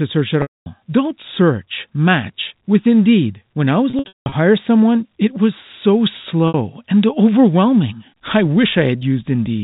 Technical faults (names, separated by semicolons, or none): packet loss with pitch repetition